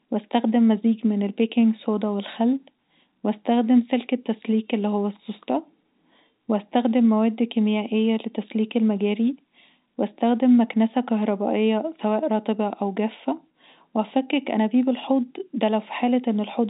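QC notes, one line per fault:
Nothing stood out on listening; the speech sits within the narrow telephone band of G.711 coding, with no sound above about 3.8 kHz.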